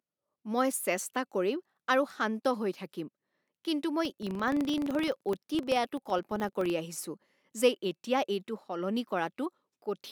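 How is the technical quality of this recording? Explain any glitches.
The recording has one glitch, a filter restarted on every block, from 4.05 to 6.76 s, starting just after "শান্ত হৈ থাকিম কিন্তু". The filter discards its memory at each block boundary and begins again from silence, so every block opens with a small transient. The result is a buzz of regular ticks at 23.4 Hz, which fits a 2048-sample block. The buzz rises and falls with the loudness of the speech.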